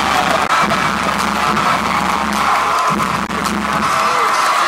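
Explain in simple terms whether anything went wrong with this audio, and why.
Two short glitches, at 0.43 to 0.50 s and 3.23 to 3.30 s, come from damaged data in a compressed stream. Part of the file was corrupted, so the player misread it and the sound briefly broke up.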